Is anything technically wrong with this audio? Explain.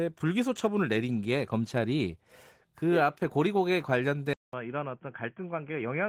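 Yes. At 4.33 s, after a 200 ms silence, the sound turns dull and boxy, likely from an input switched to a poorer device. Nothing passes above 3.4 kHz, the level drops about 5 dB, and faint new background noise appears.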